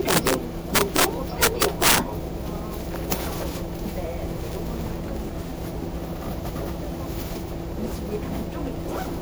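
Generation loss runs through the whole clip. The sound is swirly, smeared and hollow, with blurred attacks, more degraded than a single encode would leave it. The character points to MP3 at around 128 kbit/s. The likely cause is repeated decoding and re-encoding, perhaps around seven passes. Each pass quantises again on a shifted frame grid, so the noise and the spectral gaps pile up from one generation to the next.

Integer overflow appears as violent cracks from 0.09 to 0.34 s, 0.75 to 1.04 s and 1.43 to 1.98 s, with a single crack at 3.12 s. In these passages the level was pushed about 4, 7, 6 and 4 dB past full scale. Instead of being limited, the peaks wrapped around to the opposite sign, flipping across the entire range. The result is a snapping, tearing noise far harsher than ordinary clipping.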